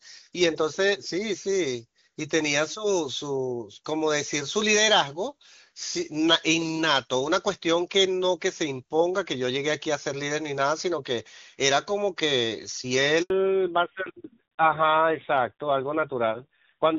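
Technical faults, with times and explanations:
13.22–13.30 s, handover gap: the audio fades out within a few tens of milliseconds and stays silent for about 80 ms. No speech frames reach the receiver while the call moves between networks, so that stretch of speech is simply lost rather than concealed.
13.30 s to the end, fallback to narrowband: after the gap, all content above 4 kHz is gone. The clear wideband sound, which fits HD Voice at a high rate, becomes duller and rougher, consistent with a low-rate narrowband codec around 7.4 kbit/s.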